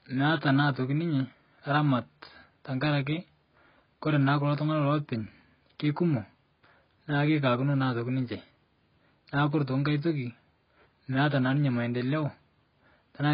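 AAC compression runs through the whole speech clip, from start to finish. Nothing is heard above about 5.4 kHz, so the speech sounds dull, and the remaining bands carry a heavy warbling, smeared texture, worst on sibilants and held vowels. This is likely AAC-LC coding starved of bits, pointing to a very low bitrate around 16 kbps. The encoder dropped everything above the cut-off and quantised the rest so coarsely that parts of the spectrum come and go from frame to frame.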